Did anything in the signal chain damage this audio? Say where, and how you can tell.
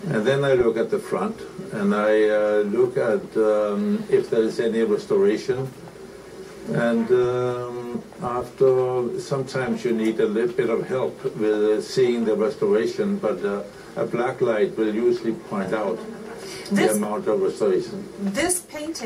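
No, I can't hear any damage from any stage of the signal chain anywhere in this audio.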